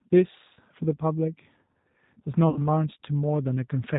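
Speech coded with G.729: the band stops at 4 kHz and the voice sounds rough and synthetic, which fits an 8 kbit/s codec, unlike a plain low-pass that leaves the timbre clean. VoIP packet loss concealed by the speech codec at 0.54–0.60 s (about 20 ms lost) and 2.50–2.61 s (about 60 ms): a buzzy tone or coloured noise that fades replaces the sound rather than silence, with weakness or distortion lingering afterwards.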